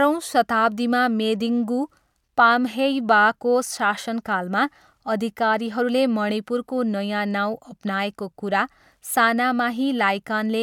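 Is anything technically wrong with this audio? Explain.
No, nothing technically wrong stood out on listening to this speech recording.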